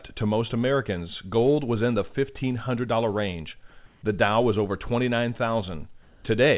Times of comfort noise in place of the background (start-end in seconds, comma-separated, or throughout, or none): 3.86-4.02, 6.02-6.24